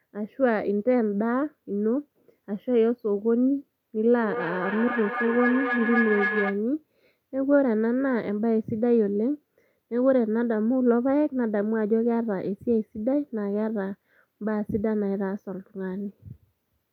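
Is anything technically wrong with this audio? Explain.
Yes. Feedback howl runs from 4.18 to 6.67 s. A microphone is hearing a loudspeaker on the same call, so each trip around the loop comes back louder. The sound narrows to a tone near 1.5 kHz, pulsing roughly every third of a second and peaking about 3 dB below the speech.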